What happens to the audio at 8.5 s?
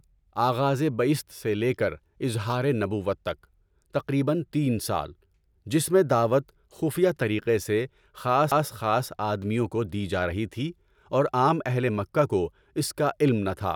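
At 8.51 s a CD skip occurs: the laser jumps to another turn of the disc's spiral, so the speech briefly mutes for a few milliseconds, ticks, and resumes from a different point. The waveform shows a near-flat gap and a discontinuity; the spectrogram, a thin vertical broadband line.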